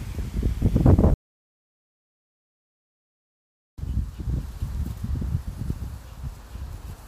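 At 1.14 s the sound cuts off abruptly into complete silence, with no background or room tone, and resumes mid-flow at 3.78 s, so about 2.64 s of audio is missing. This audio dropout to silence likely comes from a lost input while recording continued writing zeros.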